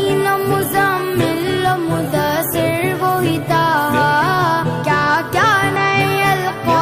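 Two short bursts of damaged data in a compressed stream interrupt the audio, from 2.42 to 2.47 s and from 5.76 to 5.79 s. Corrupted bytes made the decoder misread frames and lose sync until it found the next valid header.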